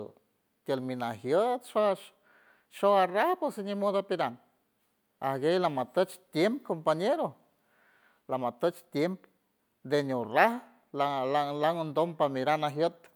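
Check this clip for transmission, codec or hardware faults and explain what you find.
Checking this clip, I find no faults to explain.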